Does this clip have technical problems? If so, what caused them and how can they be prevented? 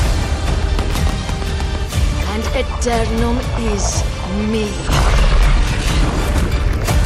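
Yes. At 0.91 s there are chunks out of order: a 5.33 ms chunk plays two chunks late, producing a brief jumbled moment with three hard joins. Reordering packets by sequence number in an adequately sized jitter buffer prevents this.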